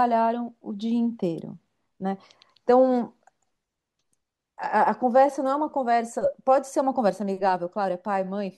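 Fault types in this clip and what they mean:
Nothing to flag here: the speech comes through without any audible dropouts, glitches or distortion.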